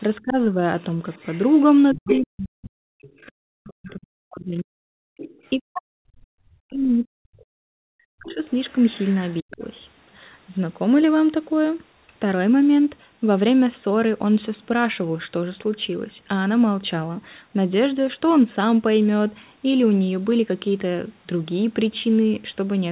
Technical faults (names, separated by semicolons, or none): speech suppressed in double talk; other side's voice leaking through